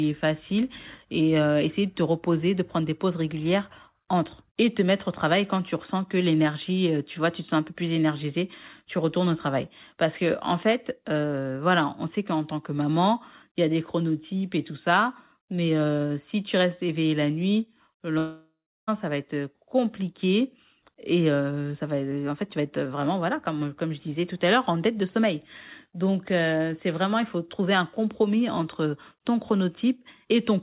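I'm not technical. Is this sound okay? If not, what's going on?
No. From 18.18 to 18.89 s, after "éveillé la nuit le", a fading buzz then silence replaces about 0.7 s of sound, likely a long network dropout, before "ça va être compliqué".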